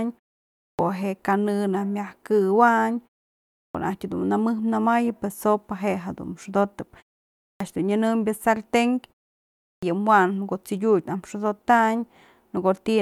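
At 0.57, 3.51, 7.35 and 9.57 s you get a clipped start after a pause. After roughly half-second gaps the output device drops off and takes 220 to 255 ms to wake, so speech jumps in abruptly with its opening sounds chopped.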